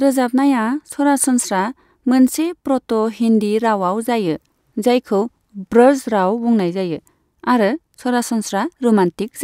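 No technical faults can be heard anywhere in the recording.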